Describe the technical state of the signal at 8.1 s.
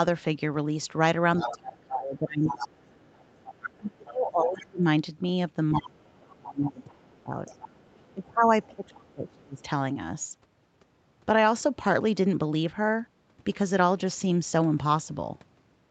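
At 8.1 s the other side's voice is leaking through. A faint second voice sits well below the talker, from 7.47 to 9.63 s. The likely cause is loudspeaker playback reaching the microphone, with the echo canceller failing to remove all of it.

Right at 8.14 s, speech starts being suppressed in double talk, and this lasts to 9.63 s. The talker's voice dips deeply. Both sides are talking at once, so the echo canceller has likely mistaken the talker for echo and turned everything down.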